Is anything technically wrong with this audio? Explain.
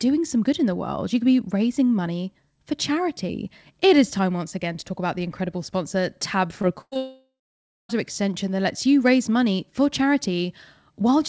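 Yes, there is a cluster of network faults in this speech between about 6.6 and 7.9 s.

Short concealed packet loss at 6.62 to 6.65 s and again at 6.94 to 6.97 s: about 20 ms of the call arrived too late each time, and the decoder bridged it by extending the preceding speech before blending back. Each is heard as a brief smear or wobble.

Burst of packet loss from 6.81 to 6.94 s: roughly 100 ms of consecutive audio went missing. The receiver stretched the last sound and faded it down, leaving a held buzz or hiss that ends in about 40 ms of silence before the speech resumes further on.

Long network dropout from 6.97 to 7.91 s: the likely cause is a lengthy interruption in delivery, with about 920 ms of speech never played. After a fading continuation of the last sound, about 560 ms of silence remains, and the speech returns with that stretch gone. The G.722 call path contributes nothing above 8 kHz.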